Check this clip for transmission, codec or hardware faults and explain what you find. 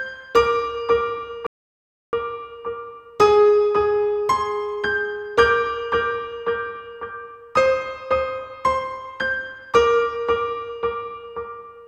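One transmission fault stands out. A rebuffering stall runs from 1.47 to 2.13 s: playback exhausted its downloaded audio, fell silent for about 0.67 s, then resumed exactly where it stopped, adding time without losing material.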